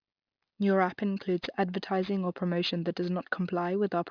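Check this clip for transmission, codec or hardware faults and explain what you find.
One fault runs through the whole speech clip: aliasing. The audio was resampled to a much lower rate without an anti-aliasing filter, which fits a drop to about 11 kHz. Energy above the 5.5 kHz folding point mirrors back down as unrelated frequencies, roughly 20 dB below the speech. Sibilants turn gritty and metallic, and the spectrum stays full right up to the 5.5 kHz edge. A properly filtered rate drop would sound dull but clean rather than harsh.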